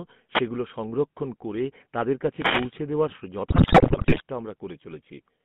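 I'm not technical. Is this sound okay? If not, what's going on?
No. The GSM full-rate codec, heard throughout, squeezes the voice the way early mobile phones did. It rebuilds speech from a rough model driven by regular pulses and keeps only the range between about 150 Hz and 3.5 kHz, so the voice sounds buzzy, gravelly and muffled.

Two wireless microphone noise hits come at 0.32 to 0.41 s, just before "সংরক্ষণ করে তাদের", and at 2.33 to 2.74 s, just after those same words. The radio signal from the microphone briefly faded, and the receiver's own hiss rushed up as a quick swish of static.

GSM bit errors run from 3.5 to 4.21 s. Part of the digital phone data arrived scrambled over a weak link. The decoder then rebuilt the voice with wrong settings, so the speech breaks into squawks, pops and gargling for that stretch.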